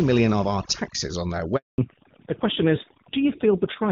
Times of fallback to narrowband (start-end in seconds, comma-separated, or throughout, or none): 1.78-3.91